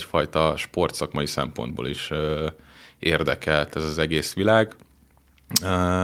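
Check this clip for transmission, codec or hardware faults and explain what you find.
Nothing to report: the speech has no audible faults at any point.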